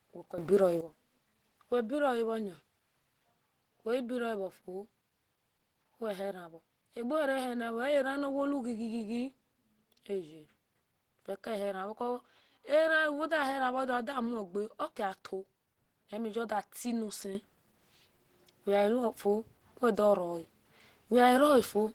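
Speech that sounds muffled and hoarse, with grainy, rough texture throughout, the likely result of Opus compression in its hybrid speech mode at a low bitrate around 16 kbps, unlike MP3's swirling holes. Sudden gain jumps of about 12 dB (0.38 to 0.81 s) and about 9 dB (17.35 s to the end) are likely unramped gain settings: background noise steps up with the speech, which a compressor wouldn't do.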